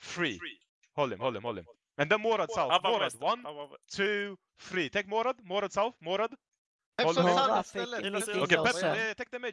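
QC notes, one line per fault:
Nothing stood out on listening.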